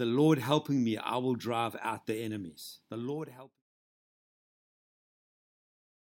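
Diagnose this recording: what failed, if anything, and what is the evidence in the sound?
Nothing failed; no fault can be heard here.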